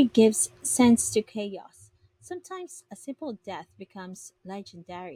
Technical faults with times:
0.98-1.59 zipper noise

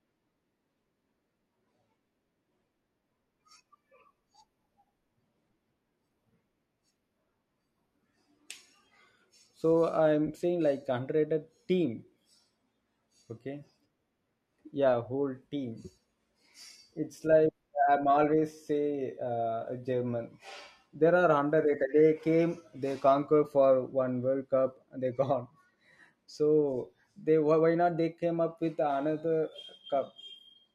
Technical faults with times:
none

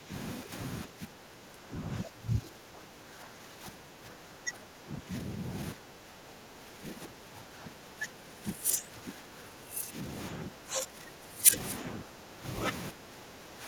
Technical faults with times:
0.00-0.12 speech suppressed in double talk
0.43-0.53 speech suppressed in double talk
0.85-11.56 speech suppressed in double talk
11.90-12.45 speech suppressed in double talk
12.91-13.68 speech suppressed in double talk

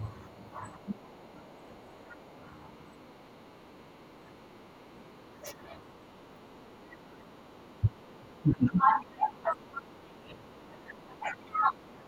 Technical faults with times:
0.39-2.25 speech suppressed in double talk
0.90-2.75 other side's voice leaking through
3.23-12.07 speech suppressed in double talk
3.68-7.17 other side's voice leaking through
10.63-11.95 other side's voice leaking through

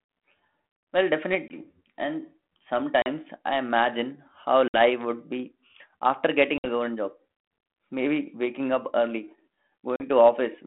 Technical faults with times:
1.48-1.63 packet loss on an ADPCM call
3.02-3.07 packet loss on an ADPCM call
4.68-4.77 packet loss on an ADPCM call
6.58-6.67 packet loss on an ADPCM call
9.96-10.02 packet loss on an ADPCM call

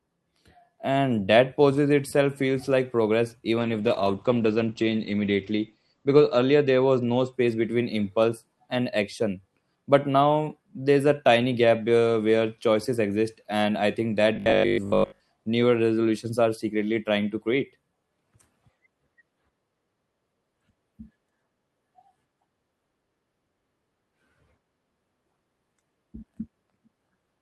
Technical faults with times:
3.60-7.39 call bitrate drop
14.36-15.20 robotic sound from repeated short buffers

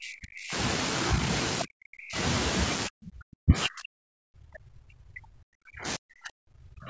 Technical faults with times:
0.00-0.54 speech suppressed in double talk
1.64-2.17 speech suppressed in double talk
2.87-6.89 speech suppressed in double talk

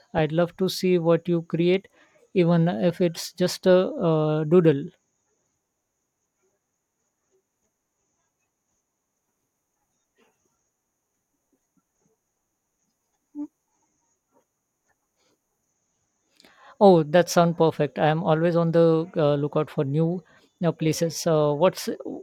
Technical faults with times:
none

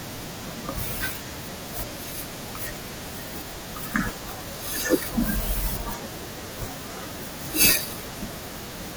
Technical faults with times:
3.60 dropped buffer (overrun)
5.90 dropped buffer (overrun)
7.90 dropped buffer (overrun)

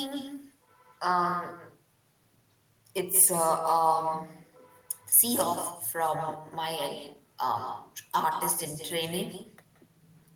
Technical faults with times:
0.00-10.35 echo with no canceller

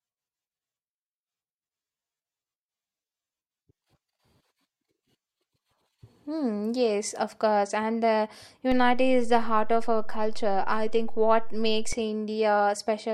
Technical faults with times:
8.72-11.93 DC step

